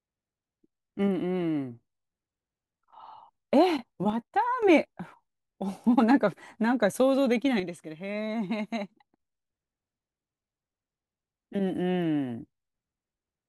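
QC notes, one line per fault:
4.10–4.63 s and 7.60–9.20 s, one channel drops out: the speech abruptly gets quieter by about 6 dB, then jumps back to full level at the end of each span. The first dip lasts about half a second and the second about 1.6 s. Any sound carried only in the missing side is absent during these spans. The likely cause is one stereo channel going silent, so the mono sum carries only half the shared signal.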